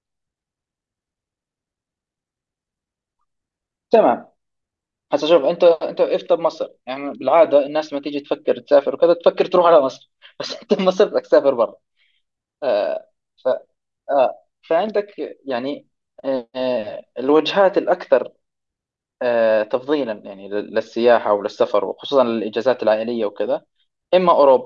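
Nothing in the recording stood out as a technical fault on listening.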